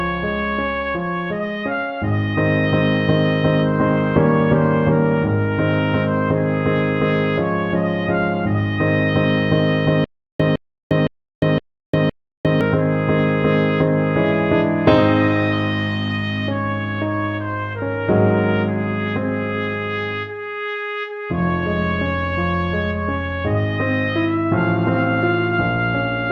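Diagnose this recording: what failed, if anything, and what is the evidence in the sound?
Stutter with silent gaps, 10.04 to 12.61 s: the same 160 ms fragment returns five times every 513 ms between dead silences, unlike dropouts. Likely a stalled playback stream.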